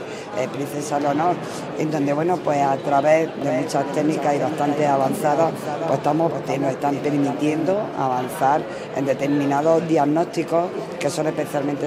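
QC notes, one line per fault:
3.42–7.74 s: doubled audio track. A second full-band copy trails the original by roughly 0.4 s at around 10 dB lower, with no decay or room colour, and cuts in and out abruptly. This is likely a slower second capture path or a misaligned edit.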